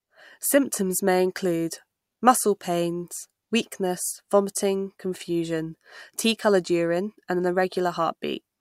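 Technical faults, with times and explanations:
Nothing here calls for a note; there are no technical faults to list anywhere in the recording.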